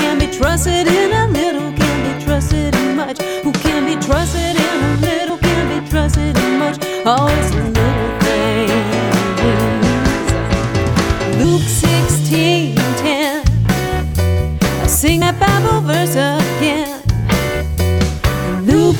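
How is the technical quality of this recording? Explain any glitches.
The recording has three short glitches. Compressed frames skipped at 5.30, 11.44 and 15.22 s: each time, about 70 ms of sound is missing, which points to a couple of lost 32 ms frames.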